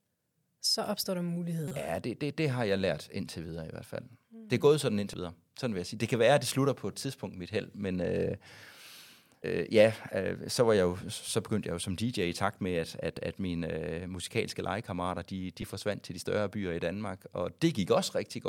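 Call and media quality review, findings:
Damaged data in a compressed stream. Corrupted bytes in the encoded speech stream; decoder misreads affected frames, loses sync, hunts for next valid frame header. Audible as short chirps or blips cutting into the speech. Times: 1.68–1.72 s (about 36 ms, longest), then brief single hits at 5.14 s, 9.42 s, 13.17 s and 15.62 s. Probable component: transport or storage path feeding the decoder, not the encoder itself.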